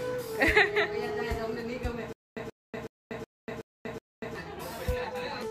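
From 2.13 s to 4.35 s the audio breaks into a stutter with silent gaps. A fragment about 131 ms long plays, then about 240 ms of digital silence follows, and the same fragment returns six times at a steady 371 ms period. The likely cause is a stalled player or stream that replays its last buffered piece on each retry before running dry. The material due in that span never arrives.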